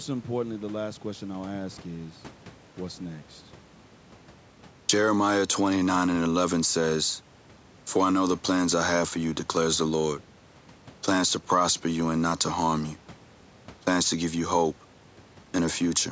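No faults are present anywhere in this speech recording.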